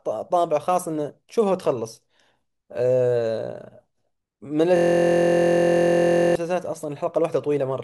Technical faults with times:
4.76-6.35 system hang loop

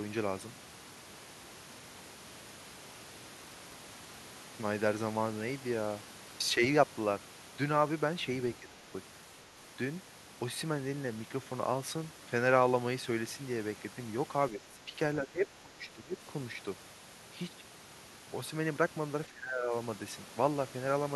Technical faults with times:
8.60-8.84 speech suppressed in double talk
14.51-14.94 speech suppressed in double talk
15.21-16.17 speech suppressed in double talk
19.29-19.73 speech suppressed in double talk

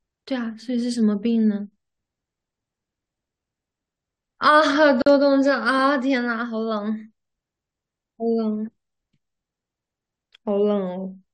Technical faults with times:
5.02-5.06 gap at a join of encoded pieces

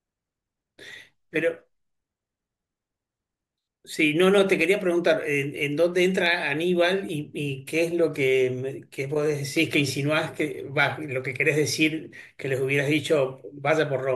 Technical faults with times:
0.48-13.70 clock drift buffer slips

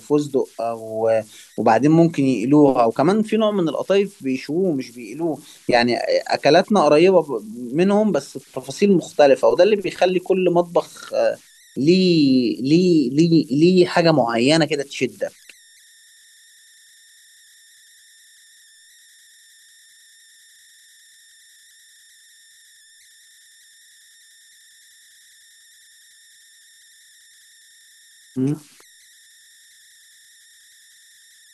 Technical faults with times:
0.00-31.53 converter idle tones

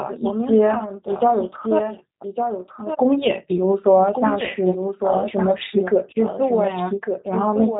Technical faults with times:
0.00-7.79 doubled audio track
0.00-7.79 G.729 codec

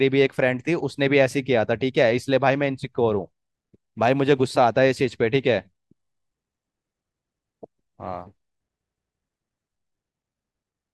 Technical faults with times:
6.14-6.31 repeated buffer
8.87-9.22 repeated buffer

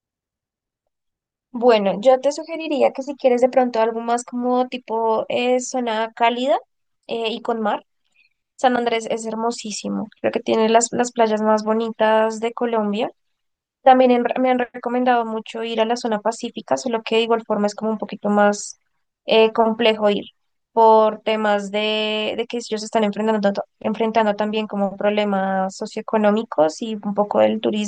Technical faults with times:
none

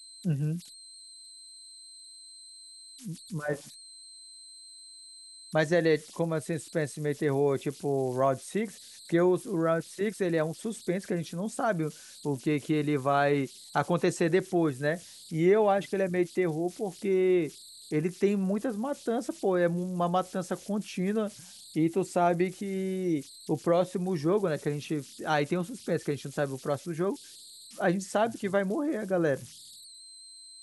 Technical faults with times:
0.00-30.62 converter idle tones

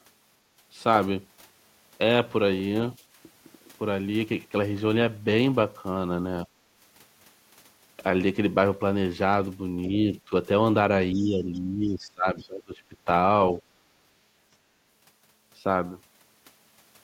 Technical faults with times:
9.87-10.13 speech suppressed in double talk
11.14-13.07 speech suppressed in double talk
11.21-11.25 other side's voice leaking through
11.54-11.59 other side's voice leaking through
11.88-11.92 other side's voice leaking through
12.39-12.47 other side's voice leaking through

